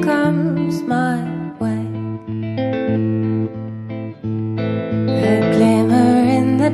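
No faults can be heard anywhere in this music clip.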